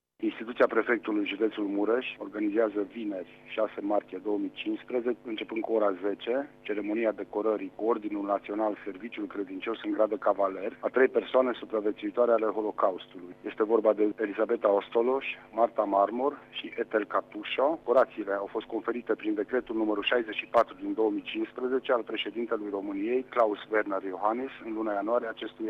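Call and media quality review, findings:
No audible faults found; nothing to flag.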